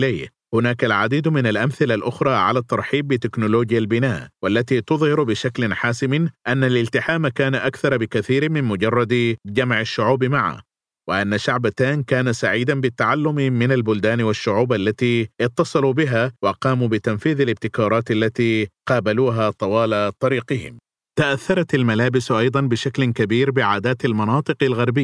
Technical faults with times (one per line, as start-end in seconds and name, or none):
none